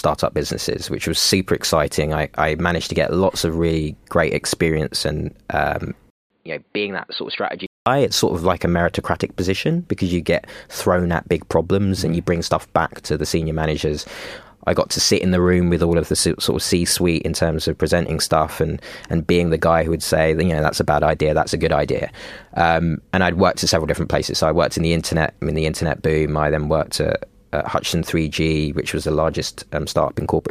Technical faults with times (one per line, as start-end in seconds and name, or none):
6.10-7.86 input switched to a poorer device